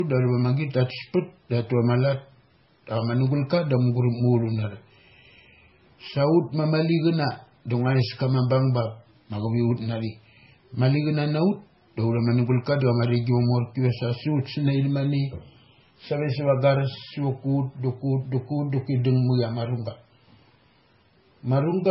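Throughout, the speech was likely transcoded between lossy codecs, a low-rate MP3 re-encoded as Vorbis, so two artefact sets layer and nothing sounds above 5.6 kHz.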